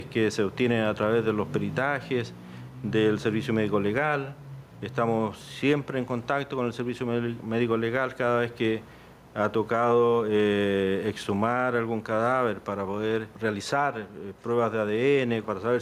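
Gain pumping runs throughout the audio, with the gain swinging around 10 dB, likely from excessive gain driving a fast limiter.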